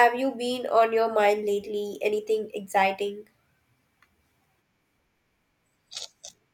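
No technical faults are audible.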